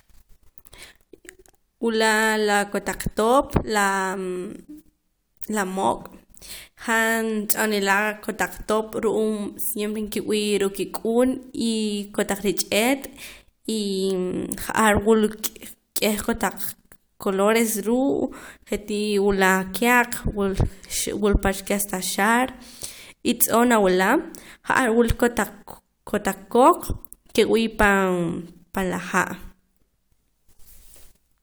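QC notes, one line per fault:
Nothing stood out on listening to this speech recording.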